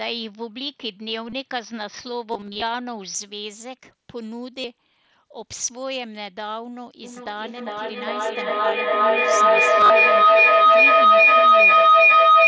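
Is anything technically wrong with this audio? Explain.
Yes. There are three kinds of fault: a degraded input at the start, dropouts concealed by the Bluetooth headset, and a feedback howl that takes over the second half.

From the start to 3.15 s the sound is narrower than the rest, while later the band extends to the 8 kHz ceiling of the call path. A faint new noise floor sits about 45 dB under the speech. Level is unchanged and there is no gap at the transition, so the likely cause is an input switched to a poorer device, which gives this stretch a duller, more boxed-in tone until the better input returns.

Concealed Bluetooth headset packet loss occurs at 1.29 to 1.33 s, 2.31 to 2.62 s, 4.61 to 4.64 s and 9.81 to 9.90 s. When audio blocks from the headset go missing, the receiver fills each gap by repeating a closely matching slice of the waveform just before it. The short 30 ms losses at 1.29 and 4.61 s are each a run of four lost frames. 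The clusters at 2.31 s (150 ms lost across 300 ms) and 9.81 s (about 68 ms across 90 ms) are broken into runs no longer than 30 ms, so they come through as brief buzzy, frozen patches with a slight warble as real audio resumes.

A feedback howl starts at 7.04 s and runs to the end. Two devices on the same call are in the same room, so sound leaving one speaker re-enters a microphone and gets louder on every trip around the loop instead of dying away. The loop settles on a tone of roughly 1.5 kHz, with a loop delay of about 0.4 s. It rises to about 16 dB above the speech, swamping it.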